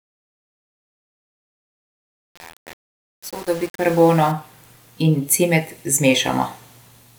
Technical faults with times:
0.00-4.31 truncation distortion on a fade

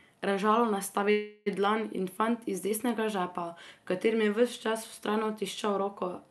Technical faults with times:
1.11-1.48 call audio freeze

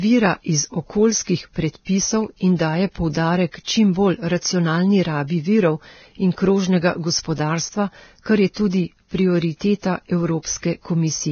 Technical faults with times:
0.00-11.31 Vorbis compression
3.64-3.67 pre-echo
8.54-8.73 pre-echo

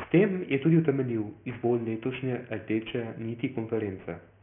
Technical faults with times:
0.00-4.43 aliasing

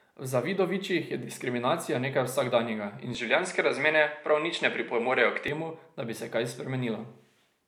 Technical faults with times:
3.15-5.48 input switched to a poorer device

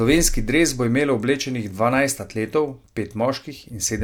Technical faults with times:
3.21 dropped samples

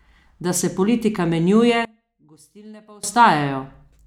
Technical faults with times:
1.85-3.03 one channel inverted

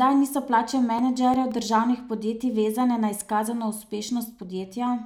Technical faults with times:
0.63-1.69 CD scratch ticks

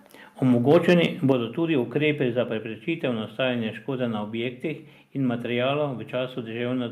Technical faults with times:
0.70-1.32 microphone overload
1.32 microphone volume stepped down

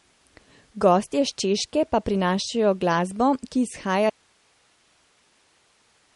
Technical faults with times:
0.00-6.15 MP3 compression
4.10-6.15 audio dropout to a faint residue

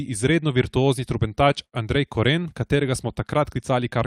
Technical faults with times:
1.64-1.75 short stall from a late packet

